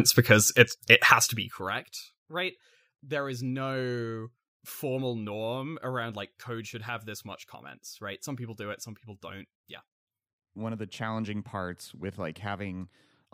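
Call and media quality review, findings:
Nothing to flag on this speech recording, so no action is needed from our side.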